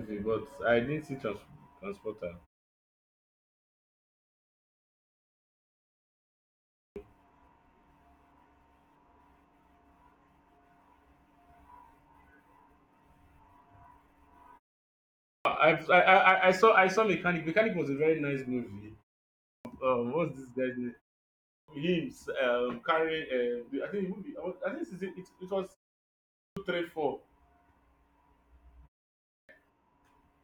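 Speech, with a clipped start after a pause six times: 6.58, 15.08, 19.32, 21.31, 26.21 and 29.16 s. Each time roughly 330 to 380 ms of the first sound is lost. The output device sleeps in silence and wakes late. Cuts follow "a very nice movie" and "guy's name", and precede "three four".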